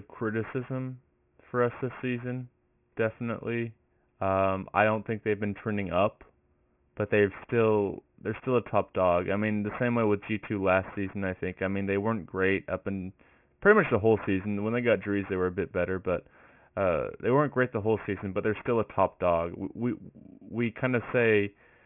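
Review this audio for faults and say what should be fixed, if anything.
Aliasing is present throughout the speech clip. Energy above about 3 kHz folds back below that edge, making sibilants gritty and metallic, consistent with downsampling from 44.1 kHz to 6 kHz unfiltered. The folded components sit roughly 20 dB below the speech. To prevent it, low-pass filter below 3 kHz before reducing the sample rate, or use a resampler with built-in anti-aliasing.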